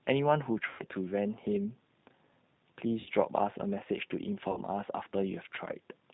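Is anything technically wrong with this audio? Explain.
Yes. The speech has passed through a G.729 codec at 8 kbit/s. Each 10 ms frame is rebuilt from a vocal tract filter, a pitch predictor and a few pulses, which leaves the speech plainly rough and synthetic. A spectrogram shows a hard ceiling with nothing above 4 kHz.

There is also VoIP packet loss concealed by the speech codec, at 0.69–0.82 s, 3.00–3.09 s and 4.51–4.61 s, covering about 100 ms, 60 ms and 60 ms of lost audio. The decoder repeats its last pitch and filter at falling gain, so the speech is stretched into a buzzy tone or coloured noise that fades. The waveform shows a decaying stretch, and the spectrogram shows a flat, smeared stretch.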